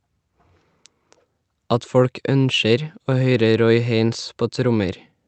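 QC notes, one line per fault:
No faults are audible in the speech. The call path shows in the top end stopping near 8 kHz, consistent with a wideband Opus setting around 32 kbps.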